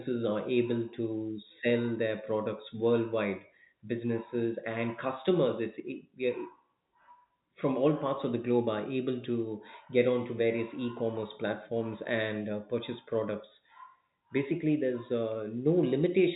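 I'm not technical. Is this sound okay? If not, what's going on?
Yes, nothing stood out as a problem when listening to this recording.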